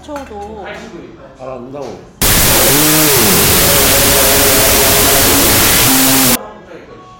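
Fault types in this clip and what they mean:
Wrong sample width: from 2.22 to 6.35 s, 32-bit float data are read as 16-bit integers, so each sample splits into two mismatched values. Loud noise buries the original, which runs at half speed and an octave low.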